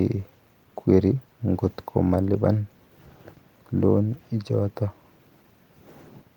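Speech, coded with Opus in hybrid mode at 24 kbps with 20 ms frames and fullband content reaching about 20.1 kHz, shows only light coding damage and no technical fault.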